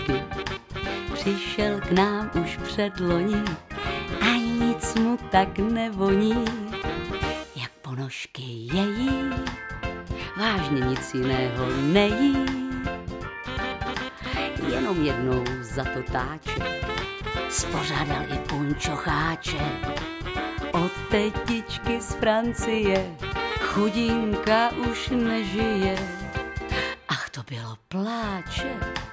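No technical faults can be heard anywhere in this recording.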